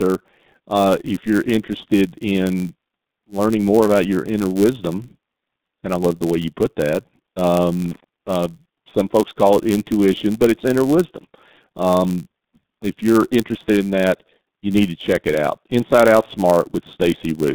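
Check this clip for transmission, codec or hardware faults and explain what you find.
Three faults are present in the speech. Two run throughout, and one is brief.

The G.723.1 codec runs throughout at 6.3 kbit/s. Nothing passes above 3.7 kHz. The coarse 30 ms voice model leaves speech heavily muffled and hoarse, with smeared consonants.

A block size mismatch (padded) also runs throughout. Each block ends in inserted silence, producing a steady buzz near 99.6 Hz. The speech runs about 0.4% slow.

Loose connector crackle appears from 7.85 to 8.04 s. A faulty contact breaks the signal rapidly, causing an irregular scratchy burst.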